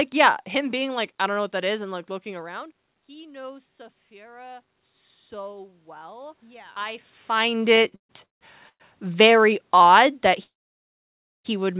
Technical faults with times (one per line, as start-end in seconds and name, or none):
1.88-4.71 automatic gain rising
5.30-7.13 automatic gain rising
7.76-8.82 repeated stalls (stutter)
10.43-11.46 call audio freeze